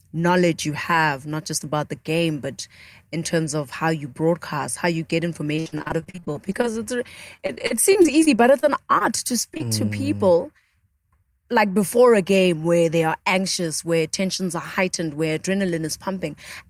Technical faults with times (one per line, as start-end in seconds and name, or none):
5.55-6.97 repeated packet loss (robotic sound)
7.37-9.02 repeated packet loss (robotic sound)
9.54-9.65 short concealed packet loss